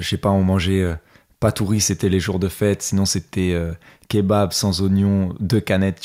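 No technical faults turn up anywhere in this speech recording, so there's nothing to pin to a moment or explain.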